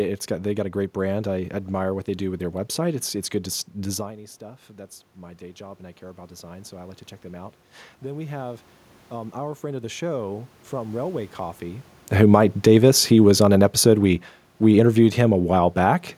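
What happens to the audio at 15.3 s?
Automatic gain falling runs from 12.11 s to 16.13 s, so 15.3 s sits near the end of a slow downward slide of about 6 dB. The automatic gain control judged the incoming level too loud, or its background noise too strong for its starting gain, and kept easing its gain back over those four seconds. By 15.3 s the speech has sunk below its earlier level, and the room noise beneath it drops by the same amount, since the whole signal is turned down together.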